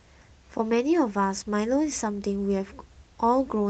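No technical faults can be heard in the speech, which comes through an ordinary call path with its usual codec character.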